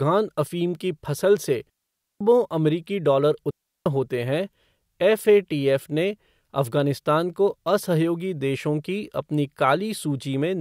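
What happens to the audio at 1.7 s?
At 1.70 s the speech cuts out for about half a second and comes back at 2.21 s. That's a digital wireless dropout. The radio link lost enough data that the receiver couldn't rebuild the signal, so it muted rather than pass along garbage, using a very quick fade on each side. You get a clean hole of near silence, roughly 510 ms long, with no crackle or noise burst at either edge.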